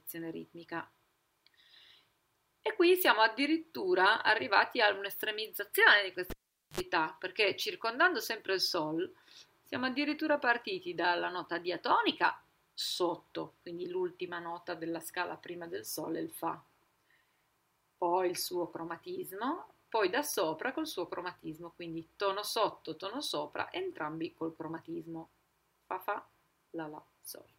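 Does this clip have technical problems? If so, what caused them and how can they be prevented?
Yes. At 6.30 s a cable was pulled and plugged in while live: a pop, about 450 ms of near silence, then a 65 ms burst of 50 Hz mains buzz as only the plug tip touched, and a second pop when the sound returned at 6.80 s. The hum burst and paired pops distinguish this from a digital dropout, which goes silent without buzz. To prevent it, mute the channel before touching any connector.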